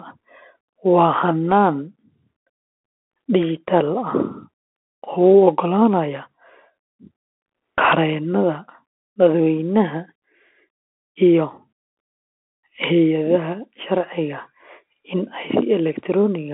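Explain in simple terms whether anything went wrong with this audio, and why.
The whole recording carries Bluetooth CVSD headset codec damage: sound stops near 3.4 kHz, with scratchy s sounds and a grainy hiss, unlike ordinary phone muffling.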